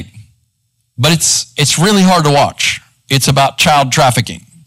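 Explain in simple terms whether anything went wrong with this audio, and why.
The recording has hard clipping running through the whole speech clip. The sound was pushed louder than the recording chain could handle, so the tops of the loudest moments got sliced off flat instead of rounding over. Those flattened peaks add a harsh, buzzy edge, and you hear it as a gritty crackle on the loudest moments from start to finish. Roughly one sample in fourteen got squashed this way.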